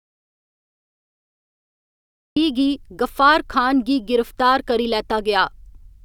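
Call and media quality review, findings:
Audio dropout to silence, 0.00 to 2.37 s, already under way when the speech clip begins: pure silence, no room tone, then speech enters mid-flow. Likely input loss at capture device or link. Unlike gating, no residual noise floor or fade.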